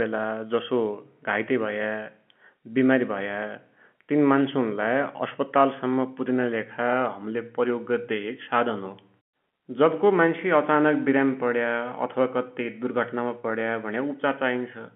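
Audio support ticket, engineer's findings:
No faults found; G.711 telephone coding behaves as expected.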